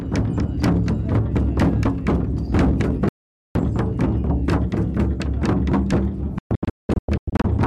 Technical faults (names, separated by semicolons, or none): audio dropout to silence; digital broadcast dropout